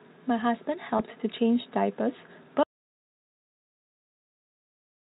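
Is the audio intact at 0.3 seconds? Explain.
Yes, the speech at 0.3 seconds is intact, with no fault to be heard at that moment.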